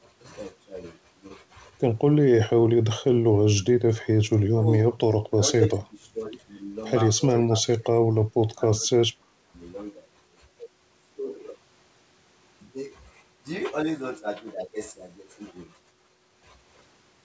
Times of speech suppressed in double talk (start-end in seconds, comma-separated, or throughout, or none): 2.20-3.87, 4.17-5.00, 5.37-5.41, 5.68-6.21, 7.40-9.40